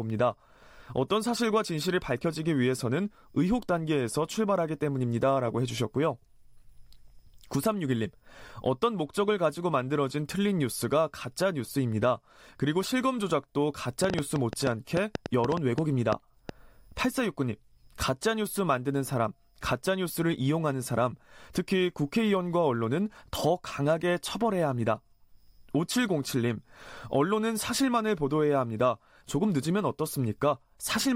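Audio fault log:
14.04–16.50 s, train of clicks: about 6 uneven clicks per second, standing well above the speech, likely from electrical interference; their matching shape separates them from random crackle.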